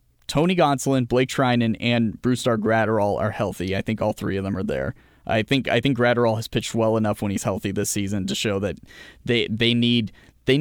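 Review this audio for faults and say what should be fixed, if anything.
A gain stage passed more level than it could hold, so peaks were cut flat by hard clipping at 0.38–0.62 s (about 1 dB over), 5.52–5.87 s after "them are there I" (about 3 dB) and 9.37–9.72 s after "season to show that" (about 1 dB), adding brief crackly harshness to the speech. Set input gain with several decibels of headroom below full scale, or place a limiter before the converter.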